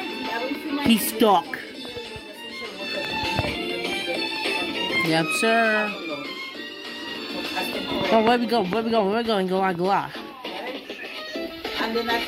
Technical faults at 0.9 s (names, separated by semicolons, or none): none